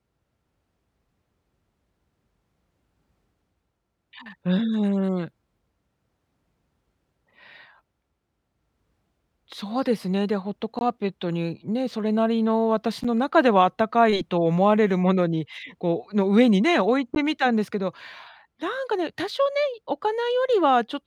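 At 10.79, 13.04 and 17.15 s, blocks of digital silence lasting 20, 10 and 14 ms cut out the speech abruptly, the shorter two heard as ticks or dips.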